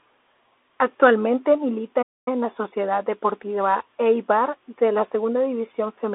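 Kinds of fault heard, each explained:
Playback stall: the speech drops out cold at about 2.02 s and stays silent for roughly a quarter second, around 243 ms, before picking up again at 2.28 s. That's likely the player running dry of data or its thread getting blocked.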